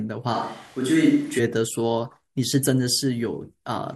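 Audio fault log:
0.36–1.38 s, switch to a distant microphone: sound turns abruptly roomy and hollow at similar level, likely a farther pickup; spectrogram shows thinner lows, smeared reverberant tails, faint noise floor.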